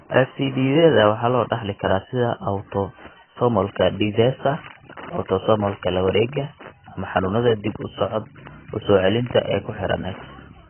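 Throughout, the speech sounds dull, with nothing above 3.1 kHz, plus heavy warbling smear that a plain low-pass filter wouldn't add: likely AAC compression at a very low bitrate, around 12 kbps.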